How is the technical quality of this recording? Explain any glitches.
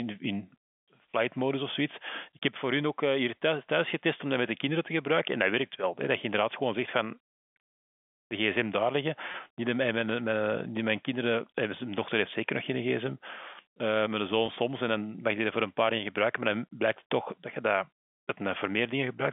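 Two brief dropouts mark the recording, heard through a telephone-band G.711 line that carries roughly 200 Hz to 3.5 kHz. At 9.32–9.34 s, after "de gsm daar liggen" and before "niet mijn mijn mijn", and again at 14.46–14.48 s, just before "soms en dan mag", packet loss with pitch repetition occurs. Each time about 20 ms of audio, which fits one lost packet, went missing, and the receiver filled the hole by repeating the last pitch period. That leaves a short, slightly held, buzzy blip in the sound.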